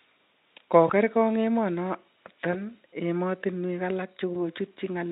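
At 0.88 to 0.92 s, 2.52 to 2.61 s and 4.33 to 4.36 s, the speech shows VoIP packet loss concealed by the speech codec. Each gap fits a single lost 20 ms frame. The Speex decoder, whose coding is faint here, filled each hole by repeating its last pitch and filter at falling gain. You hear a brief buzzy or noisy smear. The second event lingers longest, since recovery builds frame by frame.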